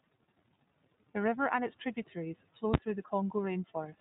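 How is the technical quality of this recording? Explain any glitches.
The technical quality is poor: narrowband codec damage runs through the whole recording, and there is one hard digital bang.

iLBC codec, throughout: in the 15.2 kbps mode each frame is coded independently and the band stops at 3.8 kHz, so the speech sounds dull, rough and synthetic.

Invalid numbers at full scale, at 2.74 s, just after "and its tributaries flow": a calculation produced invalid values that were clamped to full scale for a 10 ms block, giving a single loud bang.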